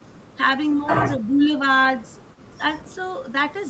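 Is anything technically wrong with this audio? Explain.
Yes. From 0.70 to 0.76 s a faint, delayed ghost of the speech slips in for a brief moment, a scrap sitting roughly 30 dB below the main voice and trailing it by about 244 ms. This is most likely an echo leak: the far end seems to be playing the call through a loudspeaker, its microphone picked that sound up, and the echo canceller let a fragment through, which was then sent back down the 8 kHz-limited Opus call path.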